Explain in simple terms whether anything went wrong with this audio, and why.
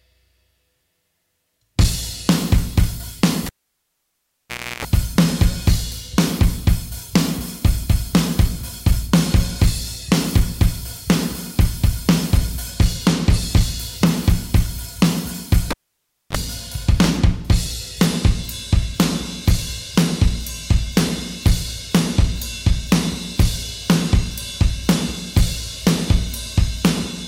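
A live cable was pulled out and plugged in twice: a cable pulled and plugged in fault. Each time there's a pop, near-silence, a mains hum while only the tip touches, then another pop: 3.46–4.85 s (60 Hz buzz) and 15.71–16.37 s (a brief 50 Hz buzz).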